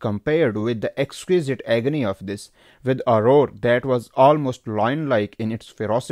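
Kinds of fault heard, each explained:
No technical faults are audible anywhere in this speech recording.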